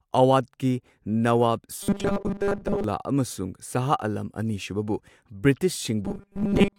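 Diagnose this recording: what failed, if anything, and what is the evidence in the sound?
The driver or buffer stage likely received new audio too seldom and filled each gap by replaying its last short block, giving robotic sound from repeated short buffers. From 1.83 to 2.84 s, and again from 6.05 s to the end, the speech becomes a rigid, metallic buzz locked at 200 Hz, which fits a repeated block of about 5 ms. Most of the real audio in those stretches is skipped, so the buzz only loosely tracks the words.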